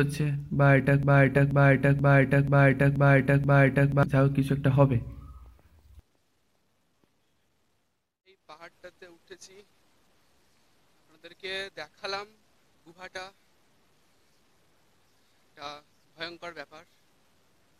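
A broken-record loop runs from 1.03 s to 4.03 s. A fragment of about 0.48 s plays six times in a row, each copy identical and butted tightly against the next, so the sound stutters mechanically instead of moving forward. The likely cause is a stall in the player, encoder or stream that kept resending the last buffered piece. Whatever should have been heard across those three seconds is missing.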